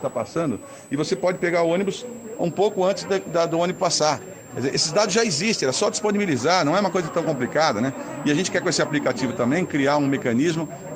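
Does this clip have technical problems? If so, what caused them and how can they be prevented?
Yes. A switching supply whistle runs through the whole clip. It is a thin, high tone sitting somewhere near 7 kHz. Its pitch wanders between about 7.3 and 8.0 kHz rather than holding steady. It sits roughly 25 dB below the sound. A switch-mode power supply running in an audible burst mode, or beating against another supply, makes this tone, and its frequency shifts as the load changes. To prevent it, use a linear or well-filtered supply and keep chargers and adapters away from the audio gear.

A bit error spike appears at 2.76 s. It is one sharp, dry tick, with energy spread across the whole spectrum. It peaks at about -35 dBFS and has nothing to do with the sound around it. Its shortness points to a single corrupted sample. One flipped bit in memory or on a digital link made the value jump by a power of two and then snap back. 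To prevent it, use error-checked digital links and sound cabling, and replace faulty memory.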